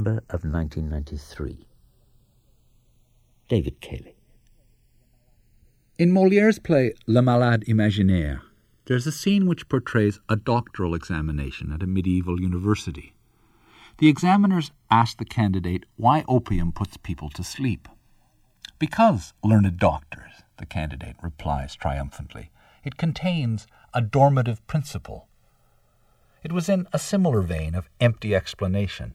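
A slow flanging sweeps through the speech from start to finish: channels drifting apart, their clocks differing by about 50 ppm, so the inter-channel delay creeps toward roughly 2 ms and comb notches glide.

From 26.96 to 27.01 s, between "it was in a" and "similar vein of", a short glitch peaking around -20 dBFS marks a corrupt frame decoded, which points to about two damaged compressed frames played anyway.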